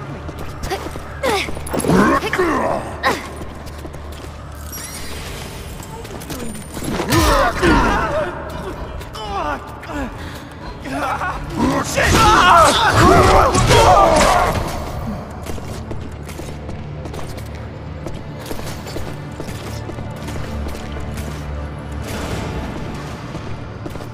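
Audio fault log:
15.60 s, dropped samples: a single sharp click, likely from a handful of samples going missing, a fraction of a millisecond's worth. The waveform jumps abruptly from one value to a later one, and the spectrogram shows one thin vertical line across all frequencies.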